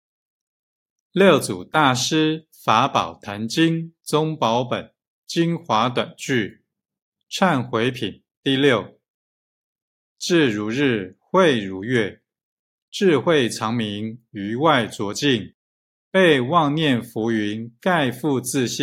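No technical faults can be heard at any point in the recording, so there is nothing to describe in time order.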